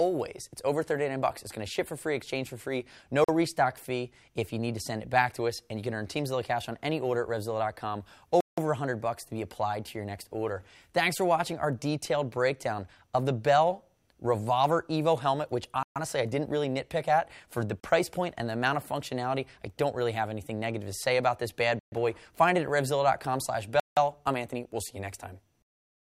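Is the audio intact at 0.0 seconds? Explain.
Yes, the audio is intact at 0.0 seconds, with no fault present at that moment.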